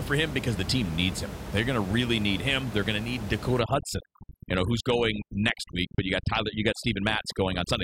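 Speech, with room noise sitting about 10 dB below the voice, until 3.60 s, just after "going to need", when overdone noise removal takes hold through to the end at 7.84 s. Bands near the noise floor are gated off, so the background drops and breaks up into twinkling specks. On a spectrogram the floor goes dark, scattered with isolated bright dots, and the voice's quieter harmonics break into patchy, missing fragments.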